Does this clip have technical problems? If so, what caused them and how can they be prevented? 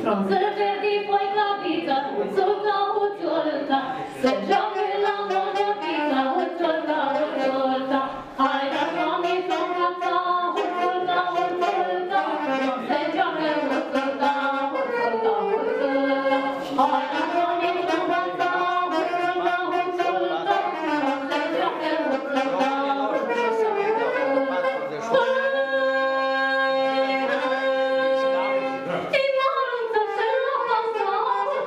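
Yes. From 15.69 to 17.89 s there's a doubled audio track: a second full-band copy trails roughly 150 ms behind, a few dB quieter, with no decay, starting and stopping abruptly. Likely a slower second capture path mixed in. Mute duplicate monitoring or loopback routes before recording.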